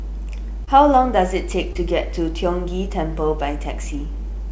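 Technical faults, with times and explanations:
Throughout, mains hum: a steady 50 Hz tone with low harmonics, nearly as loud as the speech, from a ground loop or nearby transformer leaking power-line current into the signal.
0.65–0.68 s and 1.73–1.76 s, short concealed packet loss: about 20 ms of each never arrived, so the decoder extended the preceding sound, leaving a brief smear.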